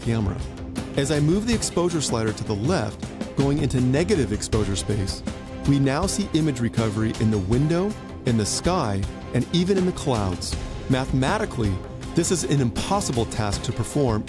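Nothing in the audio stood out as a technical problem on listening.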